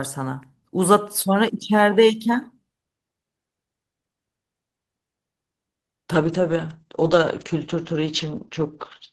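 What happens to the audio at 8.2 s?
At 8.2 s the sound is muffled and grainy, with the top end dulled and a rough, watery texture. This is a call bitrate drop that starts at 6.19 s and lasts to the end of the clip. The call's bandwidth estimate fell, so the Opus encoder had far fewer bits to work with. The coarser coding and the loss of content above 8 kHz fit a rate of roughly 9 kbps instead of the earlier 32 kbps.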